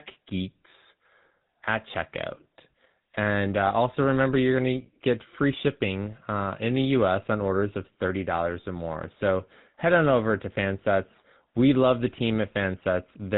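From start to finish, the speech carries the sound of the GSM full-rate codec, and the damage is plainly audible. The codec models the vocal tract as a filter. It drives that filter with a sparse train of regular pulses, and only a third of the excitation samples survive. The result is a buzzy, gravelly roughness. Nothing above 4 kHz gets through, so the top end sounds dull. The texture fits a rate of about 13 kbps.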